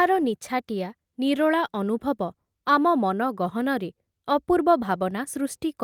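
Nothing in this bit of speech stands out as a technical problem, so there's no fault to point to anywhere along the way.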